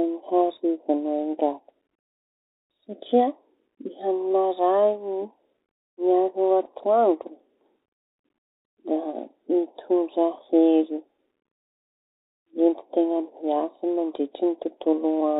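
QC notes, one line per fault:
throughout, Bluetooth CVSD headset codec: the speech sounds boxed-in and telephone-like, with nothing above 4 kHz, a grainy hiss running beneath it, scratchy s sounds, and plainly audible harshness where loud, bright sounds break up. The cause is the narrowband headset codec, whose one-bit-per-sample coding, which fits a 64 kbps CVSD link, only signals up or down with an adapting step, so fast high-frequency movement outruns the step and the quantising leaves that granular noise floor.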